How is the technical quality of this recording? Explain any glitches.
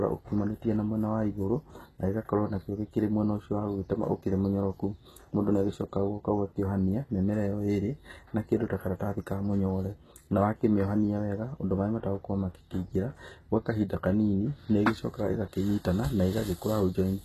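The recording is marred by plainly audible codec damage for its whole length, most likely HE-AAC compression at a very low rate, which fits a bitrate around 16 kbps. Only the lower spectrum is truly coded; the treble is rebuilt by copying lower bands upward under a coarse envelope. Harmonics fail to align across that seam, so s sounds come out gritty and lispy, and nothing remains above 12.3 kHz.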